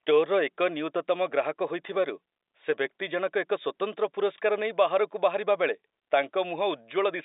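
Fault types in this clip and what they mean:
Nothing stood out on listening to this speech.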